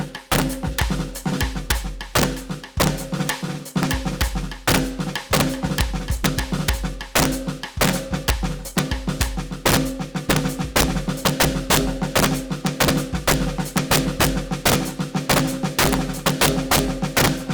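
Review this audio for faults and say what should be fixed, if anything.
There's integer overflow running through the whole music clip. The signal is being pushed about 10 dB past full scale, and instead of being held at the ceiling, every peak that goes over wraps around to the opposite extreme. Only a small share of the audio, something like 2 percent, crosses the limit, but each crossing gives a harsh crack on the loud hits, far nastier than ordinary clipping. Easiest fix: drop the gain before the integer stage and use saturating arithmetic so anything over the limit clamps rather than wraps.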